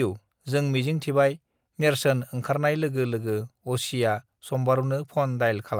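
No technical faults can be heard anywhere in the recording; the signal holds steady and continuous from its opening moment to its last.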